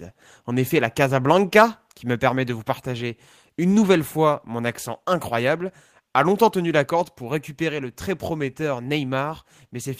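At 2.16 s, just before "permet de vous partager", the whole speech signal, voice and background together, drops by about 3 dB in one step; at 6.84 s, between "a longtemps tenu la" and "corde pour récupérer le", it drops again by about 2 dB. This is a microphone volume stepped down, likely the call software cutting the device's input gain. On a waveform the envelope shrinks abruptly; a spectrogram shows every band dimming at once.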